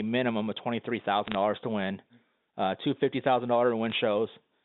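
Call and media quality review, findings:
Bit errors on a digital phone line, 1.24 to 1.35 s: burst of sharp ticks and crackle over intact speech. Flipped bits in the G.711 mu-law stream, each corrupting one sample; sign and high-order bit hits give the loudest clicks. Error rate a few tenths of a percent, spread over a handful of frames.

Bit errors on a digital phone line, 3.86 to 3.92 s: shorter, sparser tick cluster, same single-sample corruption, somewhat lower error rate. Probable component: line transport, not codec. Band stays 200 Hz to 3.7 kHz throughout.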